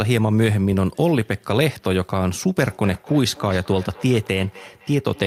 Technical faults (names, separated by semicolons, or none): feedback echo between two devices